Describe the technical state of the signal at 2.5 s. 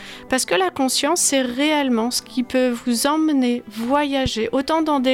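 At 2.5 s the signal is intact, with no dropout, click, distortion or other fault to be heard.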